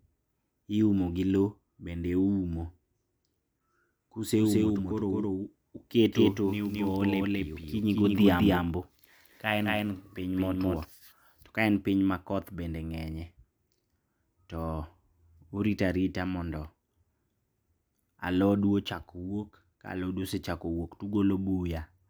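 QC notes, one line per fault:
4.37–10.85 s, doubled audio track: the speech is joined by a second full-band copy trailing by about a fifth of a second at roughly equal level, so every syllable is heard twice with a distinct slap rather than a reverberant tail. The copy carries no decay or room colouring and cuts in and out abruptly at both ends, clearing just before "to kaen piny makoth". This likely comes from the signal being captured again through a slower, delayed path.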